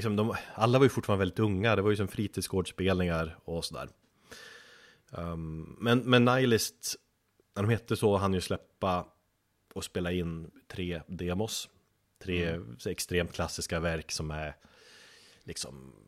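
Nothing in this speech recording's signal path stands out as faulty, with level, timing and continuity holding steady throughout.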